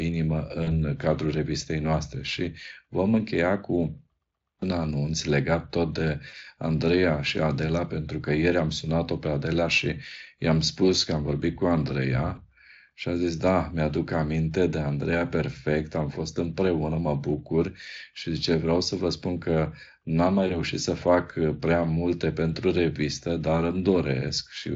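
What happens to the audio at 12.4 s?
Around 12.35 to 12.41 s there's a short bit of VoIP packet loss concealed by the speech codec, right before "și a zis da". About 20 ms of audio goes missing, which fits a single lost frame. The decoder fills it by carrying the previous pitch and filter forward at falling gain, so you hear a brief smeared, fading dip before the sound recovers.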